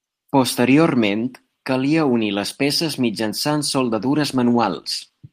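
At 3.83 s, right after "unir les peces mitjançant", a call bitrate drop sets in: the bandwidth estimate fell, and the encoder was given far fewer bits, which fits a fall from about 32 kbps to 18 kbps. Through to the end, the speech is coded more coarsely and sounds rougher.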